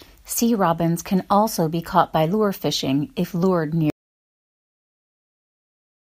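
The input feeding the recorder was most likely lost at 3.9 s, through a disconnected device, a broken link or an accidental mute, while the recording carried on writing silence. The result is an audio dropout to silence: the speech cuts off abruptly mid-flow and never returns, leaving dead, empty silence with no room tone from 3.9 s to the end of the clip. Whatever was said during that stretch is gone.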